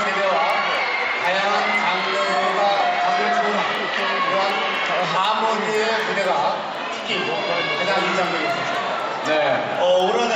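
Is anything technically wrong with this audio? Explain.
Yes. A resampler restarted on every block runs throughout: each 250 ms block is converted separately, so its edges lack neighbouring samples, leaving small ticks at 4 Hz wherever sound is present.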